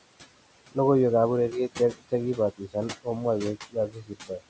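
Noise suppressor artifacts run through the whole clip: the suppressor pulls the room noise down by about 18 dB between phrases. From 3.7 to 4.12 s the noise suppressor cuts speech, treating quiet speech as noise and dropping it by up to about 18 dB, so roughly a fifth of a second sounds swallowed and faint.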